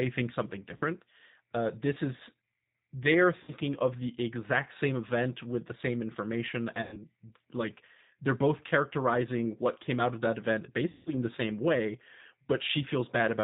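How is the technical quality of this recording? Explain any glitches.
The quality is limited by the G.729 codec throughout, with four concealed dropouts. The sound is capped near 4 kHz and is rough and synthetic. That fits an 8 kbit/s pulse-based coder, unlike the swirly artefacts of transform codecs.

VoIP packet loss concealed by the speech codec occurs at 0.77–0.84, 3.43–3.52, 6.82–6.99 and 10.90–11.10 s, spanning 40, 50, 100 and 160 ms. In each, the decoder stretches the last pitch and filter into a fading buzzy tone or coloured noise rather than leaving the silent gaps of simple dropouts, and it stays weak briefly afterwards.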